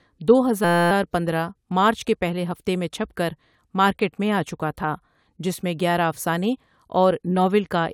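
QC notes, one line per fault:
0.64–0.91 s, system hang loop: The system froze while the sound hardware kept replaying one tiny slice of its ring buffer. A 5.8 ms piece repeats 46 times, which fits a 256-sample buffer. Because the slice is so short, the repeats fuse into a steady buzz at 172 Hz rather than a stutter. Little or no audio seems lost. Normal speech resumes at "پندرہ مارچ کے پهلے".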